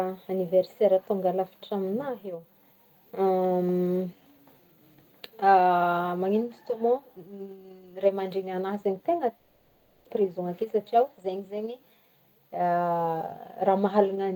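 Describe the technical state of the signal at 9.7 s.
At 9.7 s the speech sits inside a long network dropout running from about 9.37 to 10.17 s, likely a stall in packet delivery. Around 0.6 s of real audio never arrived, and the receiver papered over the gap by extending the last sound for about 0.69 s, so a fading buzzy smear replaces the speech. On a spectrogram, smeared, repeating horizontal bands decay instead of showing speech structure. The waveform shows a shrinking envelope, then a resumption with a timing jump of roughly 70 ms.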